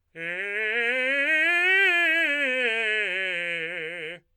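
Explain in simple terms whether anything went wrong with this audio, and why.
Nothing went wrong with this music recording: the signal stays steady and intact the whole way, with no technical problems to be heard.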